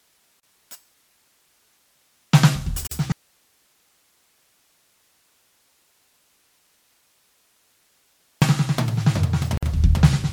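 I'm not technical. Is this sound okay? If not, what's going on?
No. Gaps at a join of encoded pieces occur at 0.40 s (33 ms), 2.87 s (44 ms) and 9.57 s (52 ms). The music was likely saved in separate chunks and stuck together untrimmed, so each join leaves a brief hole of silence before the music carries on.

An audio dropout to a faint residue runs from 3.12 s to 8.42 s, about 5.3 seconds. The music cuts out abruptly and only faint hiss remains, likely because the signal was lost while the equipment after the break stayed switched on.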